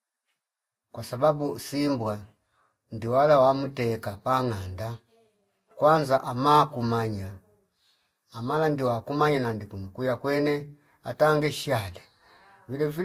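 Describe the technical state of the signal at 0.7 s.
At 0.7 s, as throughout, the speech carries two distinct layers of compression smear, which points likely to transcoding between lossy codecs, Vorbis then Opus, unlike single-codec coding.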